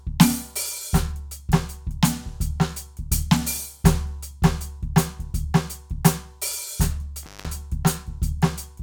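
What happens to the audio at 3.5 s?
Nothing goes wrong at 3.5 s: the music plays through that moment intact, with no dropout, click, glitch or other fault.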